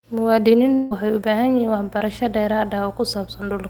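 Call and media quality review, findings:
Long network dropout, 0.73–0.93 s: about 180 ms of stream likely lost in transit; receiver extended prior sound as fading buzz or hiss, audio resumes at "waxay u" minus lost section.

Short concealed packet loss, 1.99–2.02 s: roughly 20 ms missing at decoder, patched by concealment continuing preceding sound, heard as brief smear before blending back.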